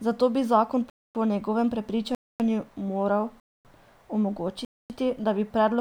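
At 0.90 s, right after "bi zakon", the speech stops dead for 0.25 s and resumes with "po njegovem". The same gap between chunks recurs at 2.15 s, after "bi zakon po njegovem", at 3.40 s, and at 4.65 s, just before "da bi". The gaps arrive after every 1.0 s of sound, so the audio was handled in one-second chunks with silence inserted at each join. No speech is missing, but the flow is broken regularly.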